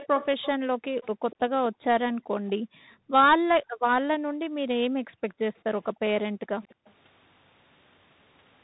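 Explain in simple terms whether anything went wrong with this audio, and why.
A few things went wrong here. The whole clip went through the Bluetooth CVSD headset codec, so nothing above about 3.8 kHz survives, and the speech sounds muffled, with scratchy s sounds and a grainy hiss underneath.

There's also an echo leak: a faint, delayed copy of the speech, about a quarter second behind, shows up at 0 to 0.47, 1.03 to 1.36, around 5.3, and 6.46 to 6.93 seconds. It's likely a speakerphone's echo canceller letting some of it through.

Finally, the background is gated by the echo canceller. The room sound drops away sharply from 0.55 to 1.02, 1.69 to 5.26, and 6.29 to 6.79 seconds, then comes back.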